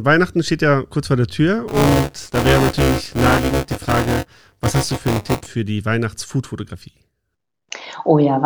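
From 1.68 to 5.46 s, starting just before "für die", the speech has buffer tearing: writer and reader have slipped, so roughly a fifth of every 5 ms period replays audio some 20 ms stale. Those hard joins give a steady robotic 200 Hz buzz riding on the signal.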